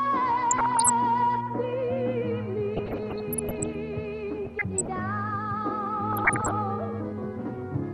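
Four bursts of DAB burbling occur, at 0.51 to 0.90 s, 2.76 to 3.75 s, 4.45 to 5.00 s and 6.13 to 6.51 s, the longest lasting about a second. Weak reception let a bit error rate of about 0.5 to 1 percent get past error correction into the MP2 data. Corrupted samples add short blips of noise in single sub-bands, and wrong scale factors throw individual sub-bands up or down for up to a frame, giving burbling blips over the programme. The sound never drops to silence as with a dropout.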